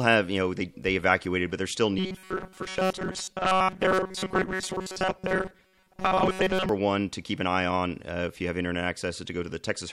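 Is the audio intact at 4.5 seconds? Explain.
No. Robotic sound from repeated short buffers covers 4.5 seconds, running from about 1.99 to 6.69 s. The speech turns into a rigid, metallic buzz pitched at 188 Hz that only loosely tracks the words. The likely cause is audio arriving too seldom, so the playback side keeps looping a fragment of roughly 5.3 ms to fill the gaps. Most of the real signal is skipped, and the steady loop rate imposes that fixed buzz.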